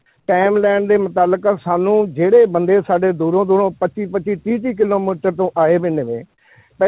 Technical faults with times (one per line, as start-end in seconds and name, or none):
0.20-0.28 comfort noise in place of the background